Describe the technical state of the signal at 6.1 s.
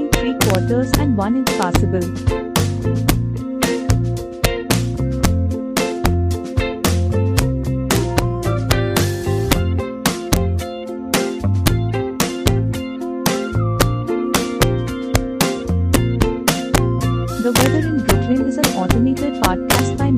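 At 6.1 s the loudest peaks break into sharp, violent cracks, harsher and more sudden than ordinary clipping. This is integer overflow, and it runs through the whole clip rather than just this moment. The signal is driven about 5 dB past the largest value the integer format can hold. Instead of being held at the limit, each peak that exceeds it wraps around to the opposite extreme, flipping across the full range. Only a small fraction of samples, around half a percent, go over.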